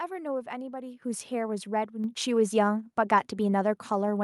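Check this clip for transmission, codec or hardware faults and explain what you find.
The audio shows a hardware-level input gain fault. At 1.02 s and again at 2.04 s the microphone volume is stepped up, by about 8 dB and then about 4 dB: the call software judged the input too quiet and raised the device gain abruptly, so speech and background noise jump louder together. On a waveform the envelope widens suddenly at each point. On a spectrogram every band, including the noise floor, brightens at once.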